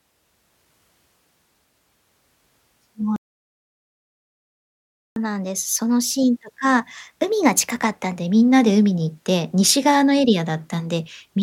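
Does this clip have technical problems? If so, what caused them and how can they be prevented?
Yes. At 3.16 s the speech cuts out abruptly and the output stays silent for 2 s, resuming at 5.16 s. This is a playback stall. The likely cause is that the player's buffer ran dry, or its audio thread was blocked, so nothing reached the output until data arrived again. Keeping a deeper playback buffer and running the audio thread at high priority, free of blocking work, would prevent it.

From 5.16 s to 8.16 s the speech sounds hurried and slightly chipmunk-like, then settles back to normal. This is catch-up at higher speed. After the stall the player resampled its backlog to play it 1.1 times faster, which also raised the pitch by roughly a semitone and a half while it won back part of the lost time. Using time-stretching that changes tempo without changing pitch, or a gentler catch-up rate, would keep the pitch steady.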